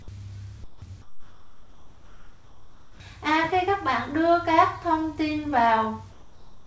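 Discontinuous transmission likely cut the sender off in the pauses, so comfort noise in place of the background fills 0.64 to 0.82 s, 1.02 to 3.00 s and 6.12 s to the end: a flat, featureless hiss about 10 to 12 dB quieter than the real background. Throughout, the call codec leaves nothing above 8 kHz.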